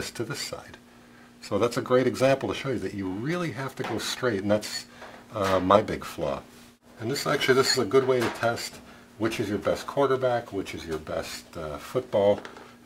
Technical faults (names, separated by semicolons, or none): periodic clock jitter